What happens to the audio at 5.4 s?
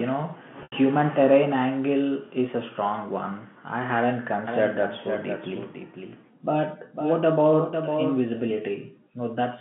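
At 5.4 s the speech is heard twice: a second copy of the audio has been mixed in, likely because a slower capture path or an out-of-step edit carries the same signal again. This doubled audio track runs from 4.47 s, just after "strong one I hadn't", to 8.51 s. The copy trails by about half a second at roughly 5 dB below the original, a dry, full telephone-band echo with no room decay that starts and stops abruptly.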